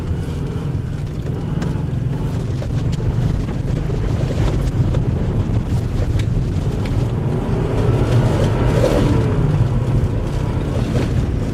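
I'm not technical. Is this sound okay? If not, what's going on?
No. From about 2.33 s to 10.23 s there is a call bitrate drop. The connection's estimate of available bandwidth fell, so the encoder was told to describe the sound with far fewer bits. It codes the audio more coarsely, and at that reduced rate it also trims away the high frequencies. The result is rougher, more muffled audio, worst for a stretch of about 4.3 seconds within that window.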